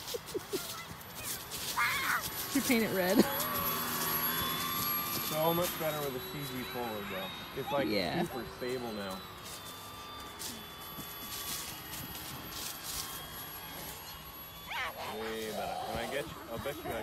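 Nothing here stands out as a technical fault, so there's no problem to pin down anywhere in the recording.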